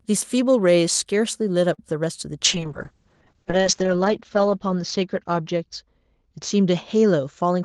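At 1.73 s the speech stalls briefly from a late packet. A packet missed its slot and the jitter buffer ran dry. The receiver held the last sound for about 47 ms, until 1.80 s, then carried on from the same point. Nothing is lost. The sound is simply stretched, with a faint buzzy hold. Everything after it plays about 47 ms later than before.

From 2.45 s to the end there is a call bitrate drop. The bandwidth estimate fell, and the Opus encoder was pushed to spend far fewer bits. The roughness fits a fall from about 32 kbps to about 6 kbps. The coding turns coarse and watery. The top end also shrinks, with the cut-off moving from 12 kHz down to 8 kHz, so the speech sounds muffled. The worst stretch lasts about 1.08 s.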